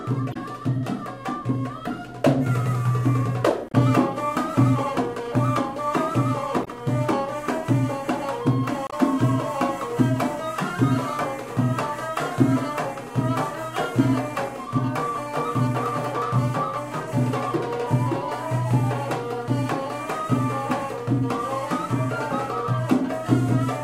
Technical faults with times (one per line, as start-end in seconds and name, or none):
0.30-0.36 damaged data in a compressed stream
3.69-3.75 damaged data in a compressed stream
6.61-6.68 damaged data in a compressed stream
8.87-8.93 damaged data in a compressed stream